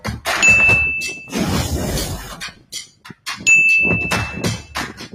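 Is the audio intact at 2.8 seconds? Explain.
No. At 2.8 seconds the sound sits inside a sound cut by the noise suppressor, running from 2.19 to 3.27 s, with a deepest drop of about 17 dB. The suppressor judged this stretch to be noise and pulled it down harder than its surroundings, so sustained and decaying parts sink or have their tails clipped while any sharp onsets still poke through. Unlike a true dropout, the sound never goes fully silent. It thins and recedes, then recovers.

The whole clip also carries a noise suppressor applied to music or sounds. A processor designed for speech keeps mistaking steady tones, ambience and reverb for noise, so level swings by around 10 dB and the sound pumps and flutters. This differs from a compressor's even gain riding because the losses follow how steady the sound is, not how loud it is. That is why the dip from 2.19 to 3.27 s runs deeper than the background pumping.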